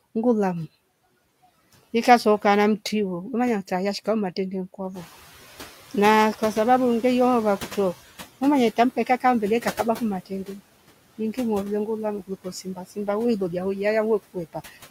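Right from the start you can hear noise suppressor artifacts on this speech. The suppressor is pulling the steady background down by about 15 dB, band by band and frame by frame, so the noise floor dips in the gaps and creeps back up under the talking.

Around 5 s the room noise jumps by about 12 dB, and you get the noise suppressor catching up from 4.94 to 5.34 s. Its noise estimate hasn't caught up with the new level yet, so the louder background pushes through with only about 10 dB of reduction. Over roughly 400 ms it adapts and the noise settles back down.

Later there are three spots of speech cut by the noise suppressor, where it mistook parts of the voice for noise and ducked them. Right after "mama ye", from 8.96 to 9.24 s, something like a tenth of a second gets pulled down by as much as about 12 dB. From 10.26 to 10.6 s there's about 150 ms dropped by up to about 15 dB. The longest stretch runs from 12.22 to 13.08 s, just before "wi lolia", with around 200 ms in total dipping by as much as about 15 dB. 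Each time the soft bits sound swallowed and faint.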